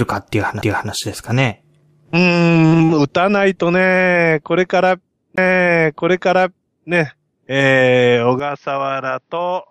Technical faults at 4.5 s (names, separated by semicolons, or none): none